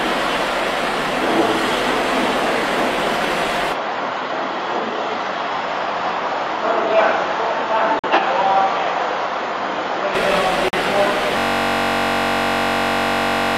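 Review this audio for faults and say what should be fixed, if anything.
From 3.73 s to 10.15 s the sound goes duller and a few dB quieter, with nothing above 7 kHz and a faint new noise floor well under the signal. There's no gap at either switch. That's likely an input switched to a poorer device. Pin the recording input so the system can't hop devices mid-take.

There are five corrupt frames muted, with abrupt holes at 7.99–8.19 s and 10.68–10.78 s. The decoder threw out damaged compressed frames and the player filled those slots with silence, so the timing still holds. Add error checking or redundancy on the transport and repair the file from a clean source.

A system hang loop starts at 11.38 s and runs to the end. A 21.33 ms slice repeats as a steady 46.9 Hz buzz, which fits a 1024-sample ring buffer cycling while the machine froze. Track down the driver or CPU stall and have playback mute when the buffer stops being refilled.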